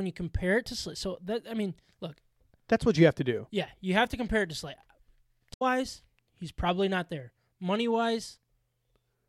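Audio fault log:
5.53–5.62 s, damaged data in a compressed stream: a short disturbance as the decoder hits corrupt frames, loses sync and hunts for the next header.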